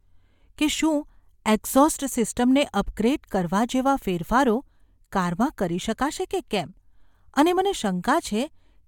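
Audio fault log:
Nothing to log here; this speech clip gives a listener nothing that stands out as a problem.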